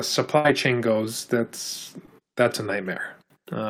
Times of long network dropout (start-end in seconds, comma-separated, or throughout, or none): none